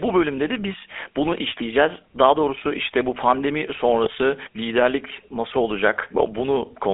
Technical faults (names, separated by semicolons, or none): GSM full-rate codec; GSM bit errors